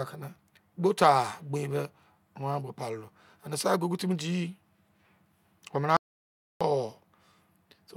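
The input signal was likely lost for a moment while recording continued writing silence, producing an audio dropout to silence from 5.97 to 6.61 s. The speech cuts off abruptly, leaving about 0.64 s of silence with no room tone, then resumes mid-flow.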